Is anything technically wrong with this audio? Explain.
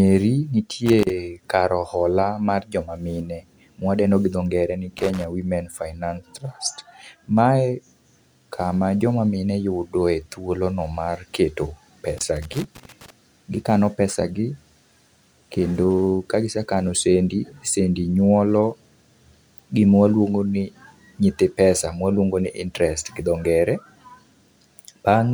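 Yes. A worn or dirty contact somewhere in the signal chain is making and breaking as it moves, producing loose connector crackle in three places. It occurs from 0.86 to 1.10 s, just before "kar ohola mar", from 4.98 to 5.25 s, right after "gi dho ngere ni", and for almost a full second from 12.18 to 13.10 s. Each time the signal is chopped on and off irregularly, so these stretches are broken by bursts of scratchy crackle.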